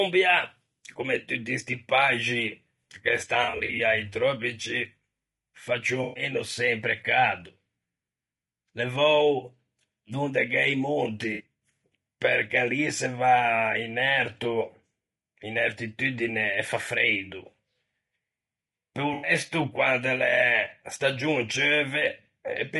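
Throughout the clip the speech sounds rough and grainy, with noise filling the gaps between pitch harmonics and a thin, synthetic-sounding top band. The likely cause is low-delay AAC compression (AAC-ELD) at a low bitrate, roughly 32 kbps, whose short frames resolve harmonics poorly.

From 3.43 to 3.80 s the sound turns smeared and noisy in broken patches. This is AAC frame loss with concealment: about 180 ms of audio is missing, scattered over 360 ms in runs of up to about 40 ms. The decoder patches each gap from the last good spectrum. Similar phasey, smeared patches occur at 6.03 to 6.23 s (120 ms lost), at 11.33 to 11.43 s (60 ms) and at 19.13 to 19.31 s (100 ms).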